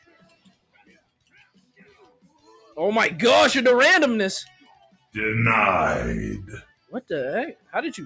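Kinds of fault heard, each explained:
Noise suppressor applied to music or sounds: a suppressor designed for speech stayed active on non-speech audio and mistook steady content for noise, so its gain keeps swinging by around 10 dB, making the sound pump and thin out across the clip.
Sound cut by the noise suppressor: the suppressor misjudged specific stretches as noise and turned them down hardest, by about 19 to 21 dB, from the start to 2.77 s, then 4.46–5.16 s, 6.61–7.1 s and 7.53–7.75 s, where sustained parts sink.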